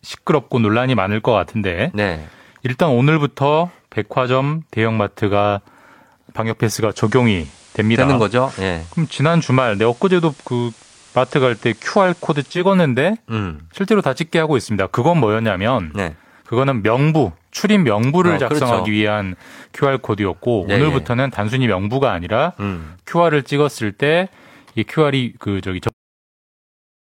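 From 6.87 s to 12.66 s the speech turns faintly hissy, with a level shift of about 1 dB. This is digital radio blending to analogue: the receiver lost its digital signal and cross-faded over 167 ms to the station's FM broadcast, then back.

At 25.89 s the speech stops abruptly mid-sound, falling straight into digital silence with no natural decay through to the end. This is a cut-off end: the final stretch of audio was never written out or played.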